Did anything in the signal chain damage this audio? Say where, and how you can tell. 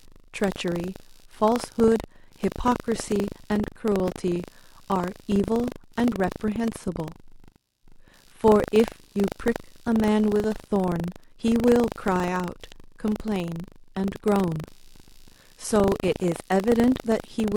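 Yes, in two places, both present throughout the speech.

In the analogue wiring there is computer activity noise: a faint buzzing, scratching pulse at roughly 70 per second, sitting far below the speech at something like 40 dB down. It tracks the machine's load through the shared ground, not the voice, so it continues in the pauses. On a spectrogram it shows as faint, regularly spaced broadband streaks across the silences.

At the driver or buffer stage there is buffer tearing, heard as a robotic 25 Hz rattle that appears only while speech is present. The writer and reader of the ring buffer have drifted so they cross every 40 ms. Each time, a small slice of audio from roughly 70 ms earlier is spliced in with hard joins. The waveform shows abrupt steps every 40 ms, and the spectrogram shows thin vertical lines at that spacing, visible only under the speech.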